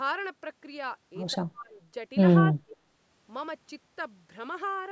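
From 1.33 to 1.76 s the speech drops sharply, by around 35 dB at its deepest, and stays turned down for most of that span. It happens again from 2.49 to 2.75 s, more briefly, with a dip of around 30 dB. Both are likely speech suppressed in double talk. The far side was talking at the same moment. The echo canceller mistook this talker for loudspeaker echo and turned the speech down.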